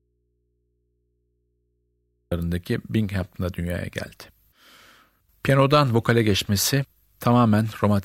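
Right from the start the speech is already gone, and until 2.32 s there's just a faint hum sitting about 50 dB below the level the speech comes back at. That's an audio dropout to a faint residue, likely a lost signal feeding a still-live input that picks up mains hum.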